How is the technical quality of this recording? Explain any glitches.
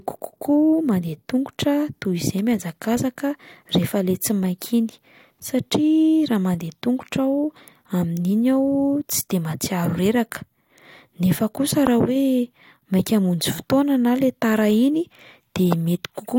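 Two loud pops get in the way of the speech, one at 11.87–11.89 s and one at 15.72–15.75 s. Each is a single, sharp pop peaking roughly 15 dB above the speech, and the talking carries on underneath. The likely cause is a sudden voltage step or pulse from a plug, switch, static discharge or driver glitch that got added to the signal and then shaped by the circuitry downstream.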